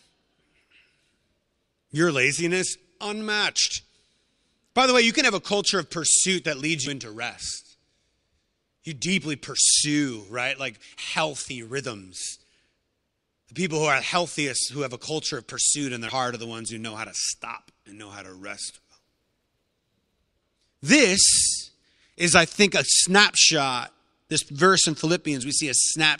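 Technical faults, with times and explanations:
6.83–6.89 s and 16.05–16.11 s: damaged data in a compressed stream. Each event is a brief blip of about 50 ms in the speech. Corrupted bytes there make the decoder misread those frames and lose sync. It then searches for the next valid frame header.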